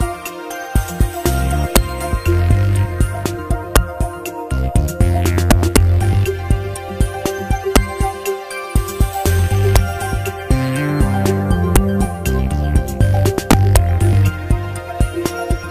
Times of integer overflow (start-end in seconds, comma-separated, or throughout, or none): 1.76, 3.76, 5.51-5.77, 7.76, 9.26, 9.76, 11.76, 13.51-13.77